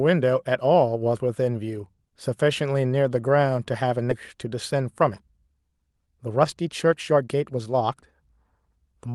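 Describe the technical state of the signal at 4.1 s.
At 4.11 s playback does a skip ahead. Roughly a second of audio was thrown away, either on the way or because the jitter buffer overflowed, and the sound on either side is spliced together with no fill, so the speech lurches forward abruptly. On a waveform this shows as a sudden change in envelope with no silent gap. A spectrogram shows harmonics and formants breaking off mid-track at one vertical edge, all under the roughly 12 kHz ceiling of the call codec.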